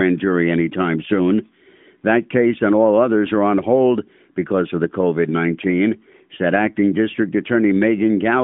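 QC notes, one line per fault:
No faults found; the narrow phone-band sound, with nothing above about 3.7 kHz, is the expected result of the AMR narrowband mobile codec, with light coding texture that fits its 12.2 kbps mode.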